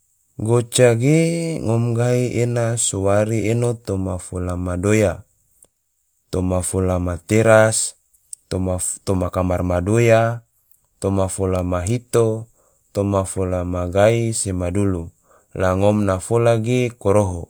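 No technical faults can be heard anywhere in this speech recording. Nothing stands out at any point from beginning to end.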